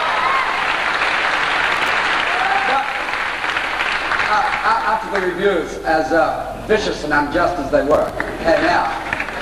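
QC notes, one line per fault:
1.71–1.91 s: processor overload crackle. The audio tears into a gritty burst as buffers of a few milliseconds miss their deadlines in a row. Each miss skips a slice of sound, leaving hard-edged jumps, which suggests a dozen or more lost buffers.
7.91–8.09 s: processor overload crackle. A second, denser tearing burst sounds as back-to-back deadline misses skip short slices of audio. The closely packed hard edges point to around thirty missed buffers of about 3 ms each, and the crackle stops once the load clears.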